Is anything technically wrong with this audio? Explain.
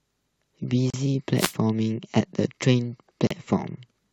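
Yes. At 0.90 to 0.94 s and again at 3.27 to 3.31 s the speech drops into a brief hole of about 35 ms, with blurred edges, then resumes where it left off. This is a gap at a join of encoded pieces: separately encoded segments were spliced without trimming the encoder's leading delay and final-frame padding.

From 1.34 to 1.55 s a short swish of static washes over the speech. That is a wireless microphone noise hit: the analogue FM radio signal briefly faded as reflections cancelled, letting receiver noise rise over the speech.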